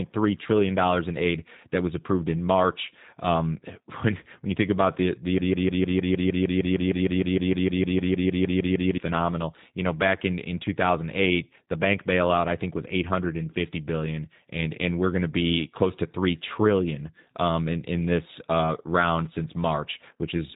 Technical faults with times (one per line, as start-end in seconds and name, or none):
0.00-20.55 G.729 codec